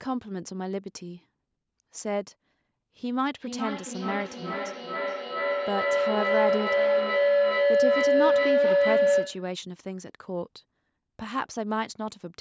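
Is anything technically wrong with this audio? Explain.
Yes, there's a feedback howl from 3.33 s to 9.62 s. It sounds like two devices in the same room joined to one call: sound from one loudspeaker gets back into a microphone, and each trip around that loop comes back louder than the last. The repeats grow instead of dying away and narrow to a tone around 500 Hz, pulsing roughly every 0.4 s, and peak about 6 dB above the speech until the loop is broken.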